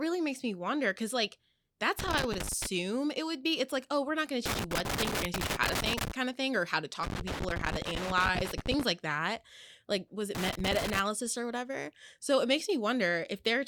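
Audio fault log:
1.99–2.66 s, 4.46–6.12 s, 7.03–8.83 s and 10.35–10.99 s: loose connector crackle. A worn contact rapidly making and breaking chops the speech into irregular scratchy bursts.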